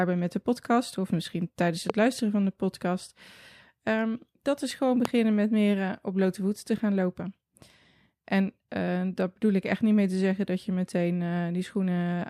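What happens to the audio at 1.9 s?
A single loud pop hits between 1.90 and 1.92 s, right after "podcast of misschien tijdens". The likely cause is a sudden voltage pulse, such as a plug, switch or static discharge, added on top of the speech, which continues through it. It shows as a tall spike well above the speech level in the waveform and a thin, full-height vertical stripe on a spectrogram.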